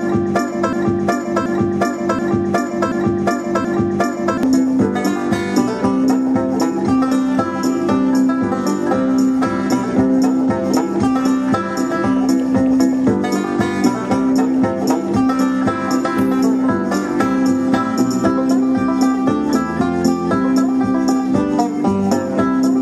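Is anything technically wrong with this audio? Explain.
Yes. From 0.73 to 4.43 s the audio sticks in a broken-record loop: one 0.73 s fragment repeats exactly, back to back, five times, and the audio that should have played there is lost. The likely cause is a stalled player or stream resending its last fragment.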